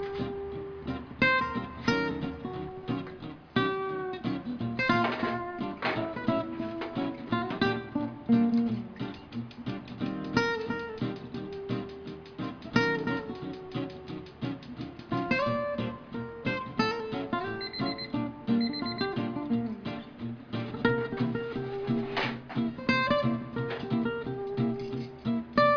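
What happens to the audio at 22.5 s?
Nothing goes wrong at 22.5 s; the audio plays through that moment intact, with no dropout, click, glitch or other fault.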